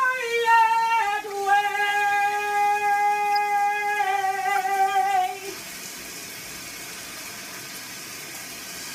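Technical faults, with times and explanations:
1.30–1.36 s, 3.32–3.37 s and 4.56–4.58 s: corrupt frame decoded, three times. Each time two or three damaged compressed frames got played anyway, so misread gains and codes throw energy into the wrong frequencies, giving short chirpy noise bursts peaking around -25 to -20 dBFS.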